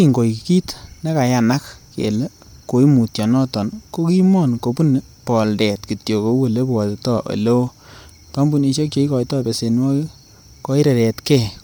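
The speech carries plainly audible codec damage from start to finish, most likely Bluetooth LC3 compression. The top end stops around 20.2 kHz, and the grainy smearing fits LC3's 10 ms transform frames at a modest bitrate, roughly 48 kbps.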